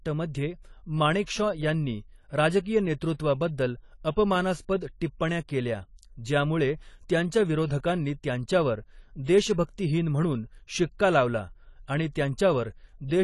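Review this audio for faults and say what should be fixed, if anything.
The whole clip carries AAC compression damage, and it is plainly audible. Nothing survives above 11.5 kHz. The speech sounds dull and smeared, with a fizzy, warbling edge on sibilants and held sounds. The likely cause is AAC-LC encoding at a low bitrate, which fits about 32 kbps. The encoder lowered its cut-off and starved the upper bands of bits. Re-export from the uncompressed source at a higher AAC bitrate.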